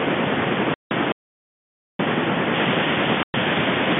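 At 0.74 s the speech falls into a 170 ms hole, packet loss filled with silence. The receiver played nothing where packets went missing, and the gap length fits 10 ms packets. Both edges are hard.

From 1.12 to 1.99 s there's an audio dropout to silence, about 0.87 s of silence with no room tone underneath. Whatever was said in that stretch is gone, and the sound cuts out and returns mid-flow. It's likely a lost input or a mute while the encoder kept writing.

From 2.54 s to the end, pre-emphasis was left on. A 75 µs FM-style treble boost was never undone, about 14 dB up at 10 kHz against 1 kHz, and within the G.711 telephone band the top end sounds thin, bright and hissy on sibilants.

Inside that bright stretch, packet loss filled with silence strikes again at 3.23 s, this time a 110 ms gap.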